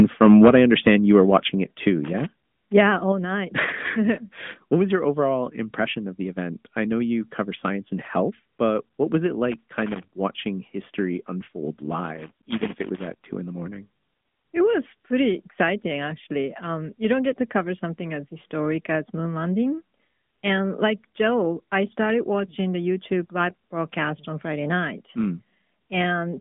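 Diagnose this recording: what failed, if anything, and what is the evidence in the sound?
AMR narrowband mobile codec, throughout the 26 s of speech. This is a codec-stage fault. Nothing above 3.7 kHz survives, and the usable band sits at roughly 150 Hz to 3.5 kHz. The voice has the plainly audible buzzy, synthetic texture of a narrowband vocal-tract model excited by sparse pulses per 5 ms subframe. The level of damage fits a mid-rate mode around 10.2 kbps, where the model cannot capture enough detail to keep speech natural.

Microphone overload, from 0.0 to 0.95 s. The loudest syllables carry a harsh, crackly edge, with peaks pushed about 8 dB past full scale and a few percent of samples flattened. The stage is the converter input. The likely cause is an input volume set too high, so the waveform tops are sheared off at the converter's ceiling and add dense high-order distortion. The codec then smears that distortion across the narrow band.

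Microphone volume stepped down, at 0.48 s and again at 1.47 s. Voice and background drop together, by about 3 dB the first time and about 5 dB the second. Both steps land during and just after the distorted opening. This sits in call processing acting on the driver. The call software likely detected clipping and cut the device's input gain in discrete steps rather than ramping it. That is why the level falls abruptly instead of easing down.

Loose connector crackle, from 12.04 to 13.26 s. An irregular burst of crackle and scratching runs for just over a second, unrelated to the speech dynamics. This points to the analogue wiring: a worn or dirty contact making and breaking as the cable moves. Each break chops the signal, and any DC offset on the line turns every reconnection into a click. Together these produce the rough, uneven crackle.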